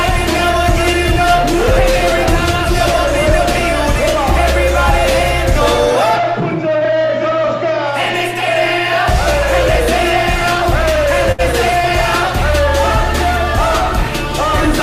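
A short stall from a late packet appears at about 11.32 s, running to 11.41 s, where the audio hangs on its last sound for roughly 68 ms instead of moving forward. A packet failed to arrive on time, the jitter buffer drained, and the receiver stretched what it already had until the packet showed up. Playback then picks up exactly where it stopped, so nothing is lost, but that moment is held too long, with a faint buzz or dip, and everything after it runs 68 ms later.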